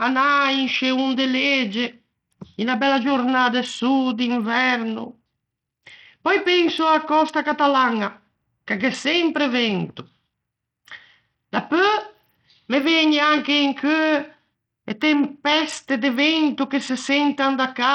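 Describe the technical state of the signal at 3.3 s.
At 3.3 s the speech carries heavy codec damage that runs through the whole clip, most likely Bluetooth SBC compression at a starved bit allocation, which fits a rate near 64 kbps. With too few bits, the upper sub-bands get little or nothing and the rest are coarsely quantised, so the treble flickers and a gritty grain and aliasing sit on the sound. On a spectrogram, energy stops at a hard ceiling near 16.8 kHz, with patchy, blocky upper bands beneath it.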